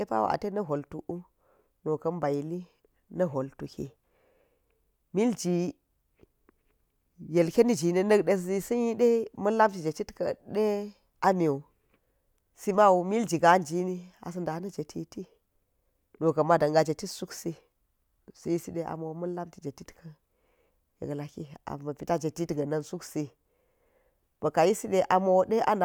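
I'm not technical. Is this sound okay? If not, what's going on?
Yes, there's nothing wrong to worry about here; the recording sounds fine, with no glitches, gaps or odd noises anywhere in it.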